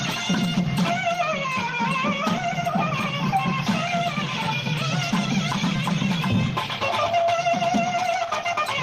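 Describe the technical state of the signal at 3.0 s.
Nothing goes wrong at 3.0 s: the signal there plays through intact, with no dropout, click, distortion or other audible fault.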